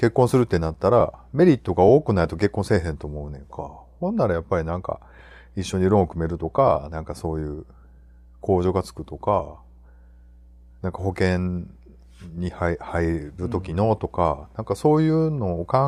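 Mains hum runs under the speech for the whole clip: a steady 60 Hz tone with low harmonics, roughly 30 dB below the speech. A ground loop or nearby transformer has coupled the power line into the signal path, so the hum never stops.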